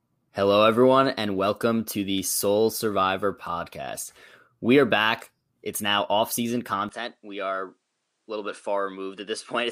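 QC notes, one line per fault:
6.89–9.71 s, input switched to a poorer device: right after "now off season" the sound turns duller and boxy, with no gap at the change. The likely cause is the recording moving to a narrower-band microphone, which passes nothing above 10.8 kHz, brings a new noise floor about 50 dB under the signal, and sits about 5 dB quieter. On a spectrogram the top band cuts off sharply at 6.89 s. The waveform envelope steps down there.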